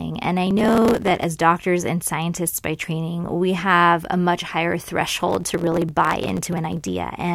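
From 0.47 to 1.24 s, and again from 5.07 to 6.88 s, the processor falls behind its audio deadlines and drops buffer after buffer, producing processor overload crackle. Each missed buffer is skipped rather than replaced, so the speech jumps forward with a hard edge. The clicks are so closely packed that they point to buffers of under a millisecond. They merge into a gritty tearing over the speech, and the second burst lasts more than twice as long.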